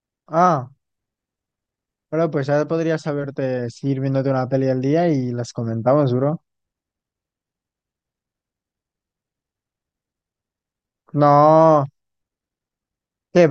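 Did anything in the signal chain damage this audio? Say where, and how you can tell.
No, nothing in the signal chain damaged this audio.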